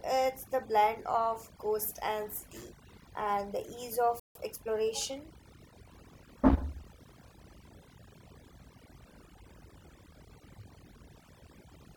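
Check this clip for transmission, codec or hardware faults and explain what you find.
Three faults are audible in the speech: heavy processing across the whole clip, plus a brief dropout followed by hurried playback.

Overdone noise removal runs throughout. A noise reducer set too aggressively has cut individual frequency bands whenever they sat near its noise estimate. The background drops and breaks up into twinkling specks. Quieter parts of the voice are stripped too.

A playback stall hits at 4.20 s, right after "city and the ease". The audio simply stops for about 156 ms and then resumes. The likely cause is the player running short of data, or its thread being blocked, so output went silent until it recovered.

Time-compressed catch-up follows from 4.35 to 5.91 s. The player trims its backlog by cutting out small pieces and cross-fading across the gaps. Speech runs about 1.1 times faster at unchanged pitch. 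It sounds slightly rushed.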